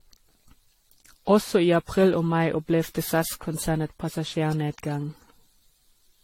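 From start to finish the speech carries generation loss. The top end stops sharply at 16.6 kHz, and the whole band has a swirling, hollow quality with smeared consonant attacks, more damage than a single pass at this bandwidth would leave. The likely cause is repeated lossy re-encoding, the character pointing to AAC-LC at around 64 kbit/s applied roughly seven times, each pass requantising on a shifted frame grid so noise and spectral gaps pile up.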